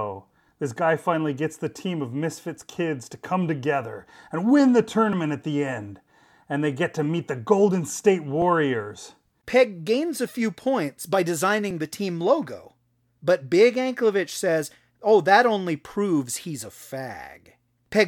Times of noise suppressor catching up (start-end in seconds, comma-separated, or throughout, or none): none